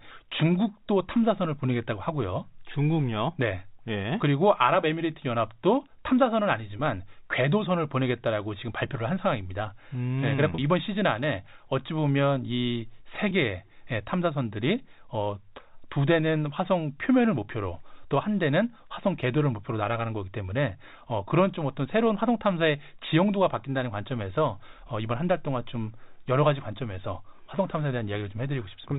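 It's a speech clip over a telephone-band G.711 link, capped at 4 kHz, with three brief dropouts from packet loss with pitch repetition: 6.77–6.79 s (20 ms lost), 10.55–10.58 s (30 ms) and 13.29–13.31 s (20 ms). The receiver bridges each gap by looping the last pitch period, so you hear a tiny held, buzzy blip rather than silence. The 30 ms one is consistent with about three 10 ms packets going missing.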